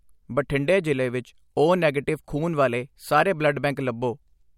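Nothing in this short bit of speech stands out as a technical problem, so there's no fault to point to here.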